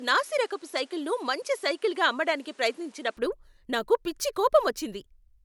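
From the start to 3.17 s the speech is band-limited, with nothing above 11.4 kHz, and carries a faint added noise floor roughly 35 dB under the signal. At 3.17 s, just before "నాకు పిచ్చి", the top end and cleaner background return with no gap and no real level jump. This points to an input switched to a poorer device, likely a different microphone whose narrower band and own noise colour the opening stretch.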